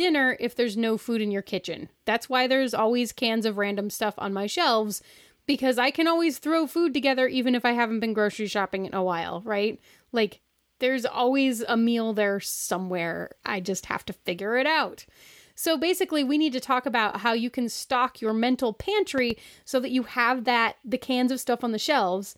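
At 19.18 to 19.33 s, between "can stock your mental" and "so that you have", a loud pop occurs: two sharp pulses, peaking roughly 5 dB above the speech, which continues underneath. The likely cause is a voltage transient, such as a switch or static discharge, entering the signal chain.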